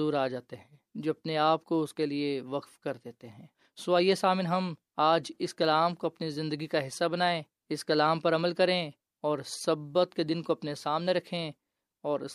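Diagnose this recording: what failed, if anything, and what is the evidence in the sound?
Nothing in the signal points to a failure at any stage of the chain: the speech arrives continuous and intact, with no audible break, distortion or disturbance at any point.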